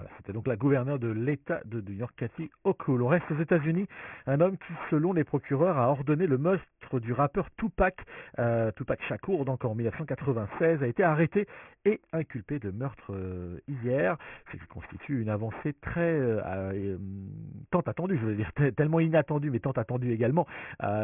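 Throughout, the speech was resampled without an anti-aliasing filter, which fits a drop to a 6 kHz rate, causing aliasing: energy above 3 kHz folds back roughly 20 dB below the signal, leaving gritty, metallic sibilants.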